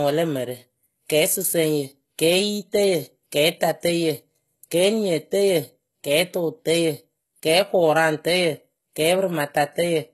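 From start to finish the speech has a gritty, metallic top with lispy s sounds and nothing above 12.3 kHz, which is likely HE-AAC compression at a very low bitrate, around 16 kbps. The treble is rebuilt from copied lower bands, so its harmonics don't line up.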